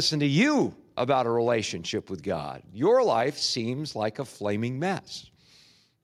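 No technical faults can be heard anywhere in the speech recording. Nothing in the audio points to a problem in how it was captured, processed or played back.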